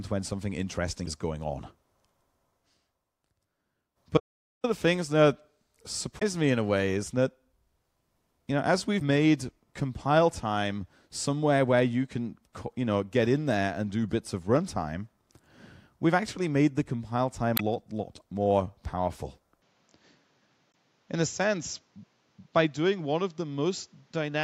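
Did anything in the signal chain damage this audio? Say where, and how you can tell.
Yes. Damaged data in a compressed stream, at the codec or storage stage: brief decoder glitches at 1.03, 6.18, 8.98, 17.54 and 20.70 s, where corrupted frames were misread.

Audio dropout to silence at 4.18 to 4.64 s. Sound cuts to dead silence for about 0.46 s, with no room tone. A lost input link is the likely cause.

Input switched to a poorer device, likely at the driver stage. From 19.62 s, nothing passes above 7.6 kHz. Level falls about 5 dB, and a new noise floor sits roughly 40 dB down.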